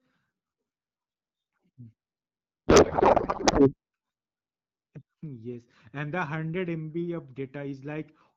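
From 2.68 to 3.74 s, a codec payload misread: octet-aligned AMR frames are unpacked as bandwidth-efficient, so speech becomes garbled, warbling noise.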